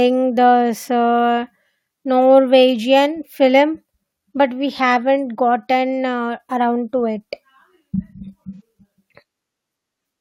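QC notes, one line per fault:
8.54–8.61 s, AAC frame loss with concealment: a brief smeared, noisy patch of about 43 ms, which fits a single lost frame. The decoder rebuilt the missing stretch from the preceding spectrum with altered phase, so the gap blurs rather than dropping out.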